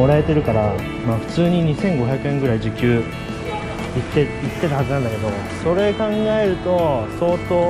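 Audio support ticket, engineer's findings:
Findings: no audio fault found, nothing to attribute to any component.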